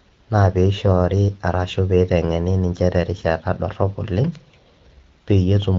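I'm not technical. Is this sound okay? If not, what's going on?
Yes, nothing is wrong: the speech comes through as expected for an HD Voice phone call.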